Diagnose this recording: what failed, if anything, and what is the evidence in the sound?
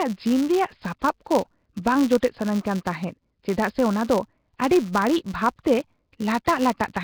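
The speech has a rough, hissy halo and a smeared, underwater quality, likely Nellymoser compression at the codec stage, heavily damaged at a low bitrate.

A steady 172 Hz buzz rides on the speech and tracks its level. This is a filter restarted on every block in the processing chain, which fits a 256-sample block.

Short hiss smears several attacks, at 0.99–1.02 s, 2.20–2.23 s, 5.63 s and 6.45–6.47 s, spanning 15 to 27 ms. This pre-echo comes from the codec spreading each block's quantisation noise ahead of late attacks.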